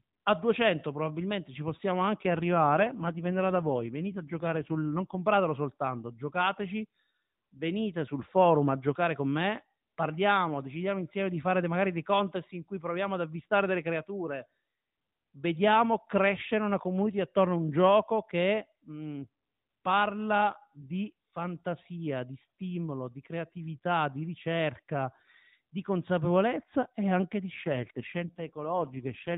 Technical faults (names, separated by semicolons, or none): AMR rate drop